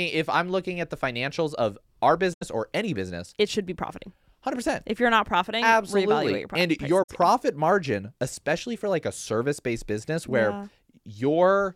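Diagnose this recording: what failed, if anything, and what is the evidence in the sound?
The failure sits at the codec stage: AAC frame loss with muting. Audio drops to silence from 2.33 to 2.43 s, after "the financials of our" and before "or any business it", and again from 7.03 to 7.10 s, between "and prices your" and "margin especially for like". The gaps, about 85 ms and 64 ms, fit four and three lost frames. The decoder zeroed the missing spectra, and the overlapping windows fade each hole in and out.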